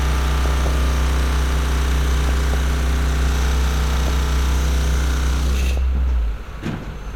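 A recording of sounds with DAB burbling at 0.46 to 0.76 s, 2.27 to 2.59 s, 3.93 to 4.11 s and 5.71 to 5.78 s. Short noise blips come from individual sub-bands, which fits weak reception letting a few tenths of a percent of bit errors into the MP2 data.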